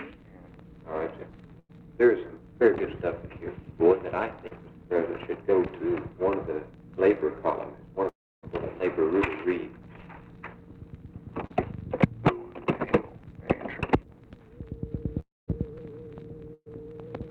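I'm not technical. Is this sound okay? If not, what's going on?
No. The connection drops bits of audio a few times.

Around 1.59 to 1.71 s and 16.54 to 16.68 s, a burst of packet loss leaves a brief fading buzz or hiss, then about a tenth of a second is simply gone.

At 4.47 s and 11.47 s, short concealed packet loss causes a quick smear or wobble, with a few hundredths of a second patched over.

From 8.09 to 8.45 s and 15.20 to 15.50 s, the sound fades into about 0.3 s and 0.2 s of near-silence, then jumps ahead. That's likely a long network dropout.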